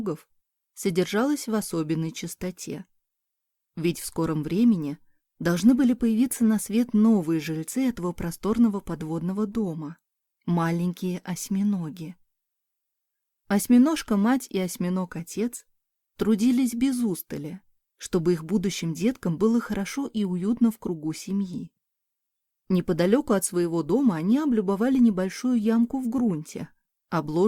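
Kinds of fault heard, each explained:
No audible faults detected.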